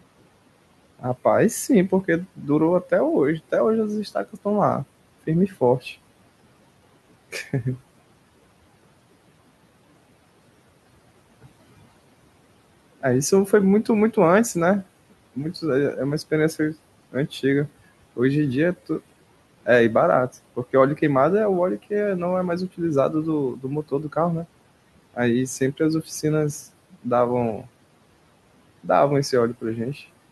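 Noise suppressor artifacts run through the whole clip: the room noise, which sits about 20 dB below the speech, is pushed down by about 18 dB in the pauses and swells back under the speech. A spectrogram shows the noise floor pumping from frame to frame, and the band edge near 12 kHz fits the Opus call path at around 64 kbps. Speech cut by the noise suppressor occurs from 0.99 to 5.85 s, 13.01 to 24.17 s, 25.14 to 27.69 s and 28.84 to 29.96 s. The suppressor mistakes soft consonants and word endings for noise and lowers them by up to about 17 dB, or about 11 dB in the last stretch. Roughly a second and a half of sound in total comes out swallowed. The waveform shows sudden dips in word tails, and the spectrogram shows missing high-frequency consonant energy.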